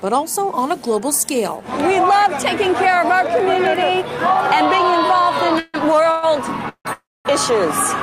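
Four brief call audio freezes, at 5.59–5.76, 6.11–6.25, 6.69–6.87 and 6.93–7.27 s, stretch the last sound into a fading buzz, the later ones dropping to silence. Delayed packets likely emptied the jitter buffer, adding 0.12–0.32 s gaps without losing audio.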